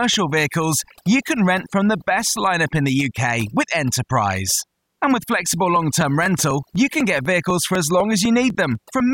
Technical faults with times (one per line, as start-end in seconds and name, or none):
0.00-9.13 overdone noise removal
4.52-9.00 periodic USB or driver dropouts